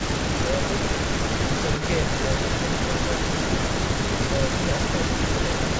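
From 0.0 to 1.9 s and again from 2.07 s to the end, an echo leak trails the speech: a second, quieter copy around 10 dB down, arriving about 215 to 219 ms late. The likely cause is a far-end echo canceller letting loudspeaker pickup return. Unlike room reverberation, it is a discrete repeat at a fixed delay rather than a smooth decaying tail.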